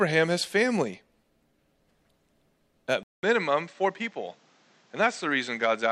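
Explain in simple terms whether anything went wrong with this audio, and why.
At 3.03 s, after a 0.2 s gap, the speech turns duller, quieter and noisier until the end, likely an input switched to a poorer device rather than gradual muffling.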